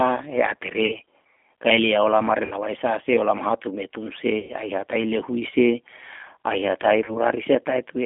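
Throughout, the speech carries the G.729 codec at 8 kbit/s. Its model-based reconstruction sounds rough and synthetic, and the band stops near 3.5 kHz.

VoIP packet loss concealed by the speech codec strikes at 0.86 to 0.97 s, 2.45 to 2.56 s (after "kae lia olama re", before "sa se"), 4.39 to 4.54 s and 7.04 to 7.19 s. The decoder stretches its last frame into a fading buzzy tone or coloured noise, covering gaps of about 40, 60, 100 and 40 ms.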